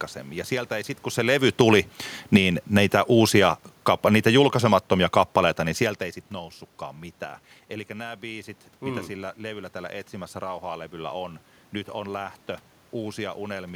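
A speech recording with an automatic gain falling fault: from 1.45 s, just after "ei sitten kun se", the level sinks steadily by about 7 dB until 5.87 s, where "ei sitten noussutkaan mitään" follows. The gain control judged the input too loud, or its background noise too strong, and pulled its gain down gradually. Unlike a talker moving relative to the microphone, as happens around 1 s and 5.5 s, the room noise drops along with the voice, showing the change came from the gain stage.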